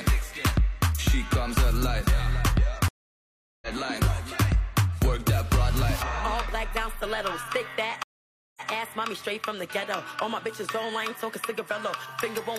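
At 2.88 s a stream reconnect leaves 735 ms of silence; a fresh decoder resumes around 3.68 s, skipping about 0.7 s of audio. A second reconnect at 8.03 s silences 530 ms, then resumes by 8.70 s, repeating the preceding 0.14 s.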